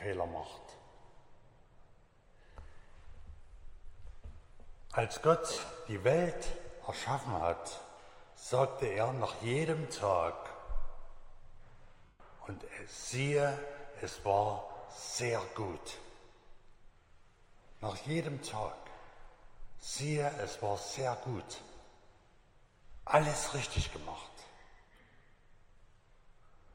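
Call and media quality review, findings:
Lost LE Audio frames: 5.51–5.73 s, about 160 ms missing in bursts over 220 ms, longest around 50 ms; 12.05–12.20 s, one 150 ms gap. LC3 concealment replays the last spectrum with randomised signs, giving a fading noisy smear rather than a plain dropout's hard silence or clicks.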